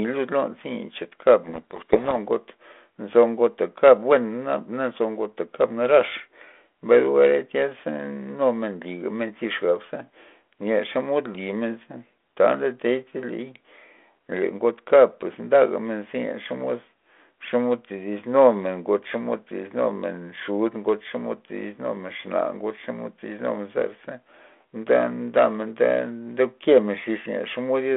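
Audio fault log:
1.44–2.17 s, codec payload misread: for about 0.73 s the speech is buried under harsh, grating distortion. The decoder is unpacking G.726 code words in the wrong bit order. Unlike plain low-bitrate rasp, this hiss stops abruptly once both ends agree.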